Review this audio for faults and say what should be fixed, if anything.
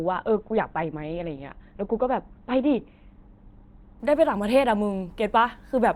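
From 0 to 4.0 s the speech is dull, with nothing above 4.4 kHz, then abruptly brightens: an adaptive stream starting at a low bitrate, upgraded after measuring bandwidth. To prevent this, start playback on a higher-bitrate version or buffer until the better version is ready.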